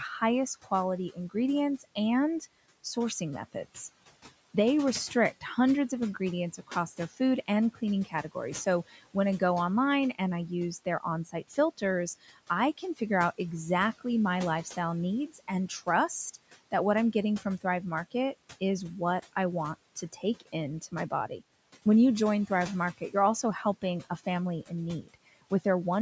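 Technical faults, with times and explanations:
0.64–2.85 s, 6.58–9.41 s, 10.85–13.01 s, 15.34–18.62 s, 19.96–21.42 s and 23.82–25.65 s, speech cut by the noise suppressor: The suppressor mistook soft parts of the speech for background noise. It pulled them down by about 14 to 18 dB, for a fraction of a second in each stretch. Those sounds come out swallowed and faint against the room noise.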